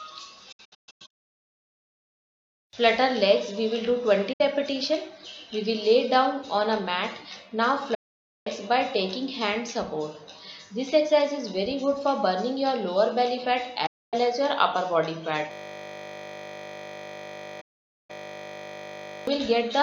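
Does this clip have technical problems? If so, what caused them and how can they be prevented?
Yes. A digital broadcast dropout occurs when the receiver loses signal or rejects corrupted frames and mutes. The sound fades to silence within about 8 ms, and the audio sent during the gap is lost. This happens five times: from 0.52 to 2.33 s as scattered holes, the longest about 160 ms, then at 4.33–4.41 s, 7.94–8.47 s, 13.86–14.14 s and 17.61–18.10 s. Better antenna placement, a stronger signal margin and more robust error protection would help prevent it.

A system hang loop occurs when the computer or driver freezes while the audio hardware keeps replaying its 20 ms ring buffer. From 15.52 to 19.27 s, that repetition produces a steady 50 Hz buzz in place of the programme. Stable drivers and a watchdog that mutes output when the buffer stops updating would prevent it.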